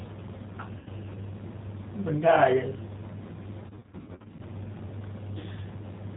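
Speech, carried throughout by the G.729 codec, whose damage is plainly audible: nothing above 4 kHz survives, and the voice has the rough, slightly synthetic grain of speech rebuilt from a vocal tract filter, a pitch predictor and a few pulses per frame, which fits an 8 kbit/s link. A plain telephone band limit would sound dull but smooth; this is buzzy and artificial. VoIP packet loss concealed by the speech codec occurs at 0.79–0.88 s, where about 70 ms of sound is missing. Across 3.67–4.42 s, roughly 400 ms is lost in scattered runs of up to 60 ms. Instead of silent gaps or clicks, the decoder stretches the last pitch and filter into fading sound, and the voice stays weak or distorted briefly after each gap.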